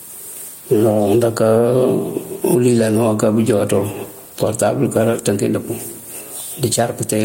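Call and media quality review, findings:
Gain pumping, whole clip: gain ducks under each loud stretch of speech, a swing of around 15 dB. Likely mic gain set way too hot, with a fast limiter clamping each peak. Dynamics squashed flat.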